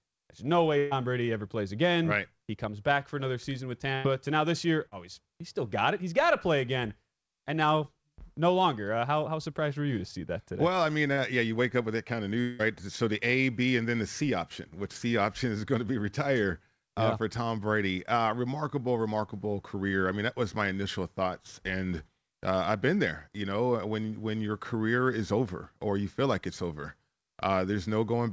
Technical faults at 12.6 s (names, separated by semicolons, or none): long network dropout